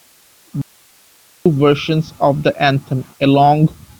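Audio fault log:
0.62–1.46 s, audio dropout to a faint residue. The speech cuts out abruptly for about 0.84 s. Only hiss remains, about 35 dB below the normal level. It returns just as suddenly. The likely cause is a brief loss of signal while the path after the break stayed live.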